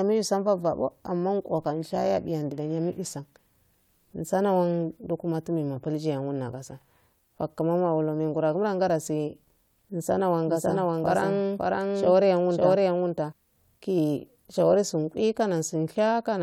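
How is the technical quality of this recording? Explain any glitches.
The recording has one glitch, a doubled audio track. From 10.47 to 13.33 s, just after "mengorowa gula dase nsana", the speech is mixed in twice: a second copy about as loud trails roughly half a second behind. This likely comes from a slower capture path or a misaligned edit. The repeat has no decay or room tone and starts and stops abruptly. On a spectrogram, every full-band pattern appears twice at a fixed offset. The waveform shows overlapping, denser envelopes with hard edges.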